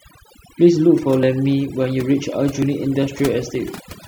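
From the first moment to the end, the speech carries the marks of overdone noise removal. The background has been pressed down, but twinkling specks keep surfacing. The reducer was set so aggressively that individual frequency bands near its noise estimate are pulled almost to nothing, taking the quieter parts of the voice with them. Plain broadband hiss would stay steady. These fluttering, tonal specks are what set this apart.

At 1.23 s there is an abrupt jump in the speech, where roughly 70 ms seems to vanish. Smaller versions follow at 2.62 s and 3.55 s, each losing something like 20 ms. These are likely dropped buffers from an overrun, where the samples were overwritten before they were read and the surrounding audio was spliced together. No gap of silence is left, which is what distinguishes this from a dropout or an underrun.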